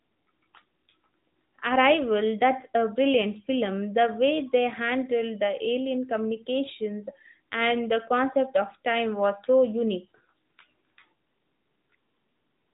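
Nothing stood out on listening to this speech recording.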